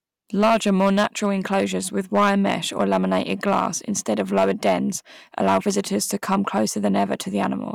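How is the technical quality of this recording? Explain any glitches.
The recording has one clear fault: hard clipping runs through the whole speech clip. The signal was driven roughly 8 dB past what one stage could pass. So its loudest peaks hit the ceiling and were sliced flat. Only a small share of the waveform, around 2 percent, goes over. Those flat tops add harmonics high up the spectrum. You hear them as a brittle crackle on the peaks of the speech.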